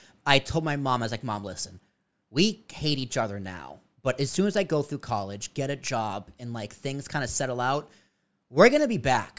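No technical faults are audible anywhere in the recording.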